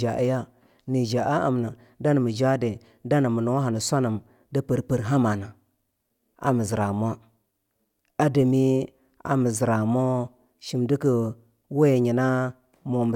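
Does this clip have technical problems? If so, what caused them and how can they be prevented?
No, there are no technical faults to trace in this speech recording, so there is nothing here to cause or prevent.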